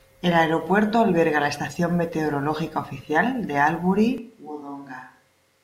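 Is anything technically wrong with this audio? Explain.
Yes. From 4.18 s, just after "estación meteorológica oficial de", the speech suddenly turns roomy and hollow, loses bass, drops by roughly 10 dB and carries more background noise to the end. This is a switch to a distant microphone, likely because the close microphone's signal was lost and a pickup farther away, hearing more of the room, took over.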